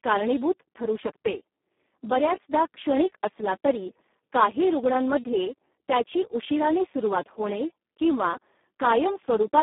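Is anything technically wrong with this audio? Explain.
Yes. Throughout, the speech sounds hoarse, buzzy and close to robotic, confined to a narrow band of about 200 Hz to 3.4 kHz with nothing above 3.8 kHz. This is heavy Speex codec damage: so few bits reach the excitation signal, which points to roughly 4 kbps.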